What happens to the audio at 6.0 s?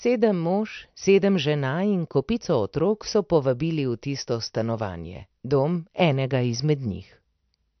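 At 6.0 s the speech carries the same MP3 compression damage heard across the whole clip: nothing above 6.1 kHz, consistent with a low bitrate near 48 kbps, and starved frequency lines flickering on and off, giving a watery, swirly tone. On a spectrogram, a hard ceiling and patchy, blotchy energy below it.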